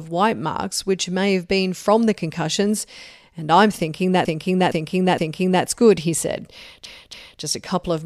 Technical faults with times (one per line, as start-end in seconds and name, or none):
4.25-5.64 repeated frames
6.85-7.41 repeated frames